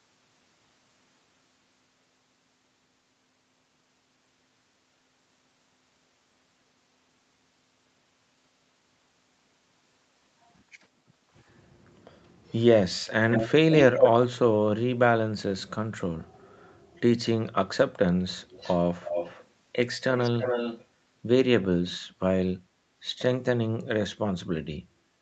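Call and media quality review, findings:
Echo leak in the speech at 13.31–13.51 s and 13.7–14.1 s: a delayed copy trails the talker by 165 ms, about 5 dB under the speech at first, then roughly as loud as the original or a touch louder. It recurs at 18.4–18.78, 19.01–19.45 and 20.15–20.85 s with a 291 ms lag, going from very faint to fairly noticeable. Likely a loudspeaker end whose echo canceller isn't fully subtracting its mic pickup, so the leftover gets sent back down the line.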